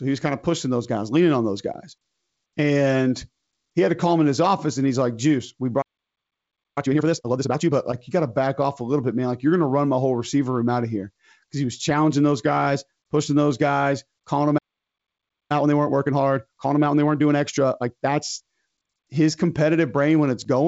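At 5.81 s the speech stops dead in mid-flow and stays silent until 6.78 s, almost a second. A second, similar break runs from 14.58 to 15.52 s, about 0.92 s. Each is a playback stall, likely the player running out of buffered data or having its output thread blocked. Unlike a dropout, where a stretch of audio is simply missing, the sound halts and then carries on after the silence.

Straight after each stall comes time-compressed catch-up. From 6.78 to 7.72 s the speech runs at double speed, and from 15.52 to 18.52 s at 1.25 times. The player is working off the backlog the stall left behind by cutting out short slices and cross-fading across the joins. This is why the pitch stays natural instead of rising as it would with a simple speed-up.

Throughout, the G.722 wideband coding, here in its 56 kbit/s mode, has a light upper-band hiss and nothing above about 7.7 kHz.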